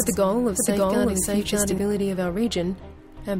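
From the start until 1.78 s the audio plays twice, a second, equally loud copy trailing roughly 0.7 s behind: a doubled audio track, likely from a slower duplicate capture path.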